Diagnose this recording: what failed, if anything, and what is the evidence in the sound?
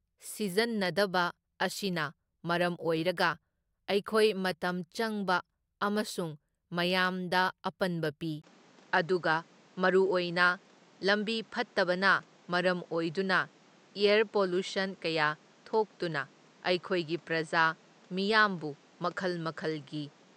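Input switched to a poorer device, from 8.42 s to the end. At 8.42 s the speech breaks for a 20 ms gap. After it, the sound is duller, with nothing above 8.6 kHz, and a new background hiss sits roughly 30 dB below the speech while loudness stays about the same. The likely cause is the system re-routing its capture, at the driver stage, to a narrower-band microphone with its own tone and noise floor.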